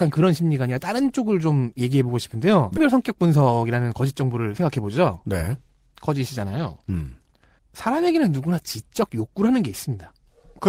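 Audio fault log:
2.77–2.79 s, skip ahead: The speech lurches forward with no pause at the join, as though about a second of talk had been cut out and the two edges butted together. Nothing fills the gap, so the sound on either side runs straight on. A stretch of audio was discarded, either lost in transit or dropped when the jitter buffer overflowed while later audio was already queued, and playback resumed from the newer material, shortening the delay by roughly a second.
2.94–4.61 s, jitter buffer speed-up: For this stretch the talking sounds hurried, running at about 109% of normal speed while the pitch stays where it was. The jitter buffer was holding more audio than its target, as happens when delayed packets arrive in a bunch, so the receiver trimmed many tiny slices of one or a few pitch periods in quick succession. Altogether around 150 ms was removed to bring the delay back down.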